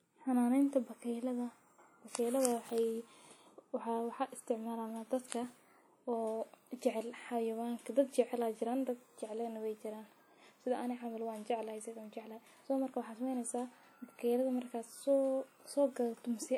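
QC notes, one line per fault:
throughout, WMA compression: the speech was likely passed through a WMA transform encoder at a low rate, consistent with about 48 kbps. Long blocks smear quantisation noise over tens of milliseconds and weak spectral lines drop out, so the sound rings and washes, with a plainly audible hiss that breathes with the signal.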